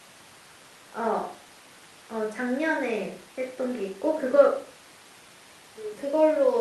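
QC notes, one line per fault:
No fault found in this clip.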